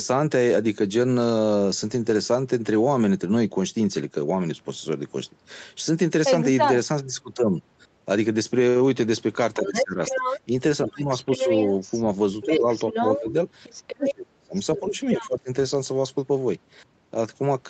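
Other side's voice leaking through runs from 9.54 to 15.39 s in this speech recording. A second voice sits only a little below the talker's level, most likely because the far end played from a loudspeaker and the echo canceller left part of it in the microphone signal. Speech suppressed in double talk overlaps it three times: 9.57 to 11.49 s, 12.45 to 13.26 s, and 13.97 to 15.49 s. In those stretches the talker's voice drops in pieces. The dips are around 20 dB in the first, a milder 10 dB or so in the second, and as deep as roughly 30 dB in the last, adding up to about a second there. This is likely the canceller, unable to tell its own talker from the echo while both spoke, turning everything down together. The call path limits the band to 8 kHz throughout.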